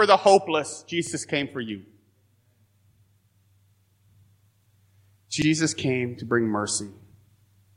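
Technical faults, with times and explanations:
1.07 to 1.11 s and 5.42 to 5.46 s, repeated buffer: at each point a roughly 43 ms slice of the speech plays twice in a row, with a hard join where the copy begins. That length fits a 2048-sample buffer that the device replayed once because fresh audio arrived late. The doubled fragment is heard as a brief stutter rather than a gap, and little or nothing is lost.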